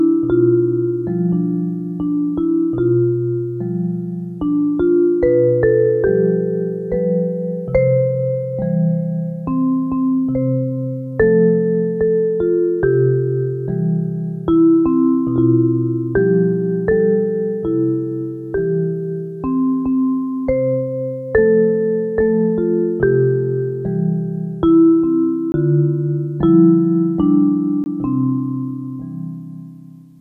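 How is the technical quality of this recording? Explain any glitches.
There are two glitches, both in the last few seconds, and they're the same kind of fault: a block of digital silence. The first runs from 25.52 to 25.54 s, the second from 27.84 to 27.86 s, each a 20 ms gap. The audio drops out abruptly and returns with no fade. That points to either the output buffer not being filled in time or a calculation producing invalid values that became zeros. At 20 ms, each one comes across as a brief hole in the sound rather than just a tick.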